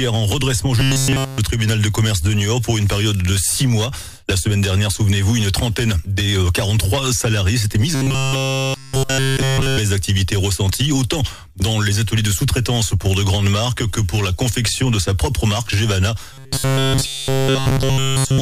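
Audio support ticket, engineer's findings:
Robotic sound from repeated short buffers at 0.80–1.38 s, 7.95–9.78 s and 16.33 s to the end at 18.41 s. Audio collapses into a rigid metallic buzz near 134 Hz. Within each span, almost none of the real audio comes through. Likely cause: buffer underrun in the playback or jitter path. The last chunk of roughly 7.5 ms loops to fill each gap. The loop rate sets the fixed 134 Hz pitch.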